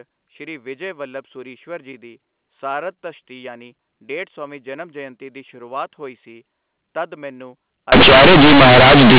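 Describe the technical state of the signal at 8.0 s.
At 8.0 s the signal suffers companded audio read as linear from 7.92 s to the end. A-law bytes are played unexpanded as 8-bit samples, giving loud, buzzy distortion and heavy noise in pauses.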